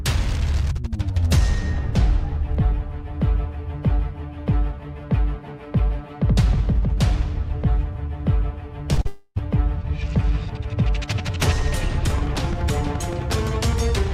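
At 8.93 to 8.99 s and again at 9.01 to 9.07 s, short concealed packet loss: about 40 ms of audio arrived too late, so the receiver continued the last sound, leaving brief smeared wobbles. From 9.07 to 9.38 s, a long network dropout is the likely cause as about 300 ms goes missing; extrapolated sound fills nearly all of it as a fading buzz or hiss, with no silence. From 12.10 s to the end, a train of clicks, likely interference or a faulty connection, ticks regularly at about 11.7 per second, slightly louder than the sound itself.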